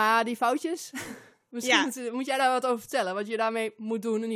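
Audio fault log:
No faults detected.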